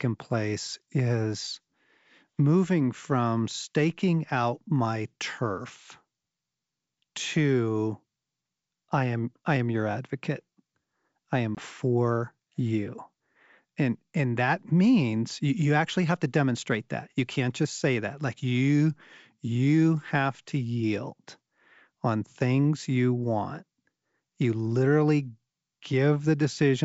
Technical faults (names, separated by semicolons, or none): packet loss on an ADPCM call